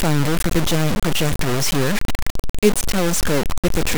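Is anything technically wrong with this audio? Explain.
Yes. Low bit depth without dither runs through the whole clip. The speech is likely truncated to very few levels, about what a 3-bit word allows, so the error tracks the signal. It makes a coarse, gritty distortion roughly as loud as the speech itself, with quiet parts sputtering or dropping out.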